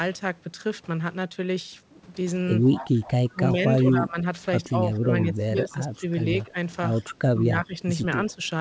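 From 2.72 to 3.3 s there's an echo leak: a copy of the talk comes back about 118 ms late and around 15 dB under the main speech, most likely because the far end's loudspeaker got into its mic and the echo canceller didn't fully remove it. It returns fainter, around 25 dB down, from 7.09 to 7.42 s.

Overlapping those, speech is suppressed in double talk, likely the canceller ducking everything while both sides talk. The speech dips by up to about 15 dB across 2.81 to 4.17 s and 4.68 to 6.05 s, then by about 10 dB at 6.43 to 6.56 s and 6.98 to 8.42 s.

The G.722 call path gives the usual band limit, with nothing above 8 kHz.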